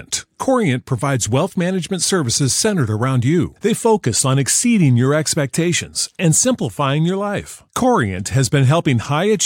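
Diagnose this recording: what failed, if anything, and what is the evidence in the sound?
Nothing in the signal chain has failed: the speech holds steady level and continuity throughout, with no breaks, distortion or added noise from any stage of capture, processing or playback.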